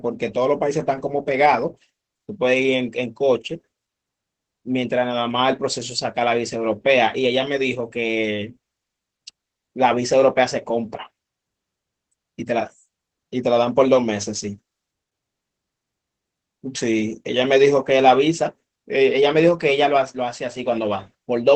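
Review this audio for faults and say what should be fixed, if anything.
Opus voice compression runs through the whole speech clip and is plainly audible. The top of the band stops at about 8 kHz, so sibilants and breath lose their edge and the voice sounds muffled. The SILK linear-prediction coder is spending very few bits on the excitation, which makes the voice hoarse and faintly robotic. That coarseness points to a rate near 12 kbps in 20 ms frames. To prevent it, encode at a higher Opus bitrate or keep an uncompressed master for review.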